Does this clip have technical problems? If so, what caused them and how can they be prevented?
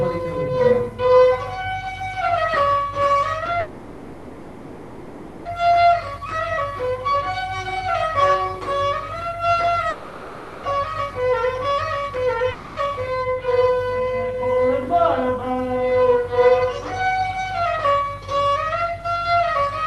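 Yes. From 3.59 to 5.47 s there is a call audio freeze: the sound turns into a fading buzz for 1.86 s, then resumes where it stopped with nothing lost. On a spectrogram this shows as smeared horizontal bands that fade out. The likely cause is packets held up in transit, which emptied the jitter buffer. Prevention: give the call steadier network priority, for example through QoS marking or a wired link, so delivery doesn't stall.

A jitter buffer slow-down runs from 6.01 to 6.72 s. Repeated pitch periods add about 51 ms and drop playback to 94% speed, so sounds drag at the same pitch. On a waveform this shows as near-identical cycles repeated. Prevention: reduce network jitter so the buffer doesn't run low and need refilling.

There are two long network dropouts. From 9.90 to 10.66 s, 0.74 s never arrives. From 12.52 to 12.79 s, 0.36 s is lost and about a tenth of a second of delay is shed. 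Each gap is filled with a fading buzz, and the audio resumes further on. A likely burst of lost packets caused them. Prevention: use forward error correction or redundancy and fix the unstable link.

A jitter buffer speed-up follows at 12.83 to 13.36 s. Roughly 70 ms is removed in short slices, so playback runs at 111% speed at unchanged pitch. The waveform shows cycles dropped at splice points. Prevention: keep packet arrival smooth so delayed bursts don't overfill the buffer.

Throughout the clip, the call path cuts off content above 12 kHz, which is visible as a flat ceiling on the spectrogram. This fits an Opus codec at about 32 kbps.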